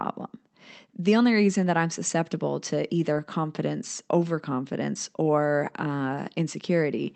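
Short concealed packet loss at 3.13 to 3.17 s in this speech clip, right after "that I'm susceptible to" and before "confidence overconfidence or": about 20 ms of audio never arrived, and the receiver covered the gap by extending the preceding sound before blending back, leaving a brief smear. The call path's Opus coding limits the audio to about 8 kHz.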